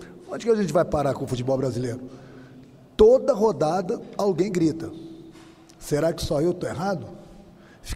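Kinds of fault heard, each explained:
No audible technical faults were detected; the signal remains steady and continuous, with no interruptions, level jumps, or distortion at any point.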